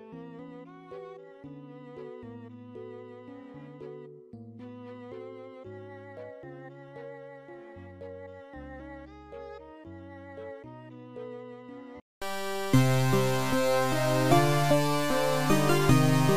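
No audible faults: level, timing and continuity hold steady throughout.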